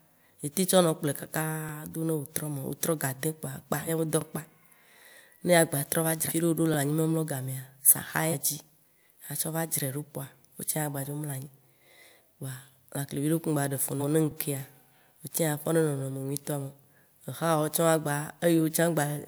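At 1.69 to 1.71 s the speech has a short stutter. This is overlapping chunks. Each new 2.5-second chunk starts before the previous one ends, so about 25 ms plays twice. It recurs at 4.21 to 4.24, 6.74 to 6.76, 9.26 to 9.29 (just before "atsɔ va dzrae"), 11.79 to 11.81 (just before "kpoa lãkle vi ɖekpe"), 14.31 to 14.34 and 16.84 to 16.86 s.

At 3.86 to 3.90 s, just before "be dɔ", the audio jumps ahead. This is compressed frames skipped. Whole frames are never played, so roughly 100 ms is lost, which fits two frames of about 42.7 ms each. Similar jumps occur at 6.28 to 6.32 and 8.31 to 8.34 s, each losing roughly 150 ms, and at 13.99 to 14.03 s, losing roughly 100 ms.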